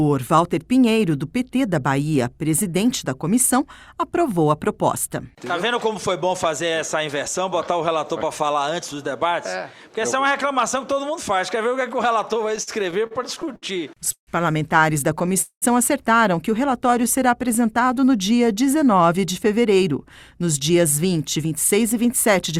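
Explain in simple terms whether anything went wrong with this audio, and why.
Between 12.49 and 14.29 s there are repeated stalls (stutter). Packets arrived late 13 times, so the receiver stretched the last sound, up to 150 ms at once, and the audio drags without losing anything.

At 15.42 to 15.64 s a call audio freeze leaves a 200 ms gap, about half of it silent, likely because packets were held up in transit. The audio then resumes where it stopped.

From 16.70 to 17.42 s a jitter buffer slow-down plays the sound at 95% speed, adding 41 ms to rebuild the buffer's reserve. The pitch stays the same.

Two jitter buffer speed-ups follow, at 19.13 to 19.92 s (106% speed) and 20.42 to 22.57 s (105% speed). Short pieces are trimmed to reduce the built-up delay, so the sound runs slightly fast.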